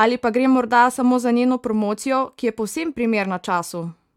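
No technical faults can be heard anywhere in this speech recording. There are no events to place in time, so there are no times or values to report.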